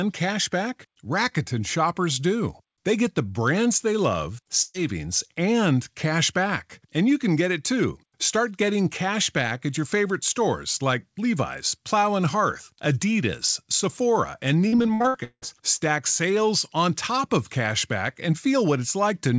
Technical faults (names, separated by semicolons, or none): burst of packet loss; repeated packet loss (robotic sound)